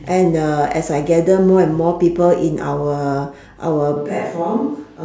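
At 3.97 s the speech turns suddenly roomy and hollow, thinner in the bass and roughly 5 dB quieter, with room noise now audible beneath it, until the end. This sudden change, unlike added reverb or an EQ change, points to a likely switch to a distant microphone.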